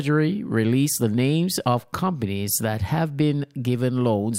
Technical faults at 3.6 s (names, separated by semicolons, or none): none